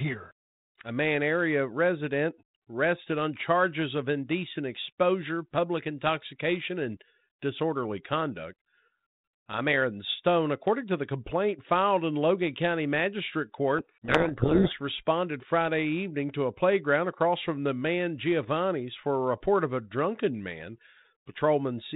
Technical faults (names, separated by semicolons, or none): codec payload misread